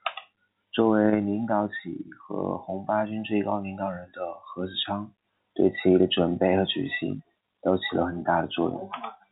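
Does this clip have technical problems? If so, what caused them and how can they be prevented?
No, there are no faults.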